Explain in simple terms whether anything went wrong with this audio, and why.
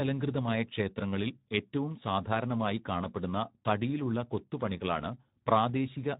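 Something did go wrong. From the very start to the end, the speech carries Speex codec damage. Speex is an older compression method from internet calling and game chat that squeezes the voice into very little data. Here it was set low enough that it can't describe the voice's natural buzz in detail, so the speech comes out noisy and hoarse. Unlike background hiss, the roughness sits inside the voice itself and is present throughout.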